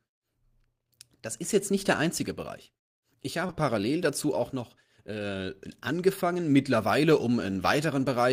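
Short concealed packet loss hits this speech clip twice in a row, from 3.47 to 3.51 s and again from 3.51 to 3.54 s. Each time about 20 ms of audio failed to arrive at the decoder in time, and the receiver papered over the gap by extending the preceding sound for roughly 12 ms before crossfading into the real signal. Back to back, the two repairs make a brief smeared wobble, and a short consonant there can drop out.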